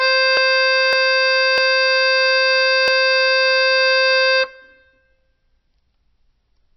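Across the whole music clip there is likely MP3 compression at a very low bitrate, around 24 kbps. The plainly audible watery, swirling texture sets it apart from a simple low-pass filter, which would dull the treble without the flickering artefacts.

At 0.37, 0.93, 1.58 and 2.88 s the sound jumps forward, losing roughly a fifth, three tenths, a tenth and a tenth of a second. These are likely dropped buffers (overrun), where samples were overwritten before being read. Unlike a dropout, no silent gap is heard.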